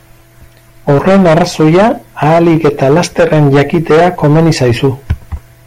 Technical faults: hard clipping

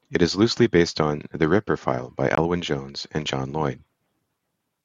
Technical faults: Bluetooth dropout

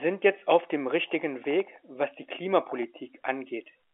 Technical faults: none

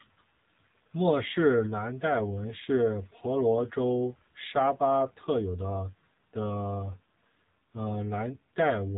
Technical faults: AMR narrowband mobile codec

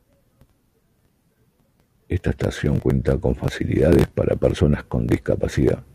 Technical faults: none

